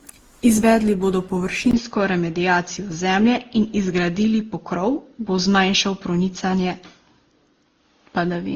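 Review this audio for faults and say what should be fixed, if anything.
The speech sounds swirly, smeared and hollow throughout, with blurred attacks. That points to generation loss, likely from about ten passes through Opus at 48 kbit/s.

At 1.71 s a 20 ms gap is followed by duller sound, with nothing above 6.6 kHz and new noise about 55 dB down. This is likely an input switched to a poorer device.

Keep one lossless master and lock the recording input so the system cannot change devices mid-take.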